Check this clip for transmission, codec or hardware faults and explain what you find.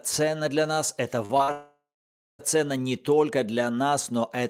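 Transmission faults are present: three short concealed packet losses followed by a long network dropout, all right after "для нас это".

Short concealed packet loss at 1.25, 1.37 and 1.43 s: about 40, 20 and 40 ms of audio arrived too late, and the receiver patched each gap by extending the preceding sound, leaving brief smears or wobbles.

Long network dropout from 1.52 to 2.41 s: likely a network stall. The receiver extended the last sound as a buzz or hiss that fades, then about 0.6 s of silence followed before the audio resumed with that stretch missing.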